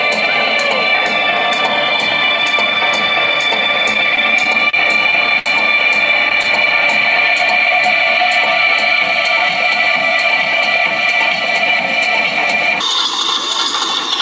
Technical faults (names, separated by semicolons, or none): repeated stalls (stutter); jitter buffer speed-up; section at the wrong speed